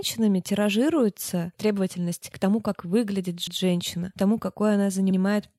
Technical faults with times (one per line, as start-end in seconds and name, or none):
3.47-3.60 repeated frames
5.10-5.17 repeated frames